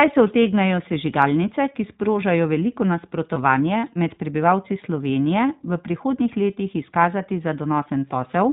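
From start to finish the speech carries the iLBC codec's narrowband sound. Nothing passes above 4 kHz, and the texture is a little rough and synthetic. Each frame's excitation is coded on its own, which fits 20 ms frames at about 15.2 kbps. Unlike a muffled low-pass filter, the harshness comes from coarse coding, not just lost treble.

At 3.34 to 3.38 s, right after "sežigalnice ki sprožajo veliko", lost iLBC frames leave a brief held, buzzy vowel. The decoder repeated the last pitch cycle with added noise, which fits about one 20 ms frame missing. Unlike a dropout's silence or a click, the gap is filled, and the voice recovers immediately.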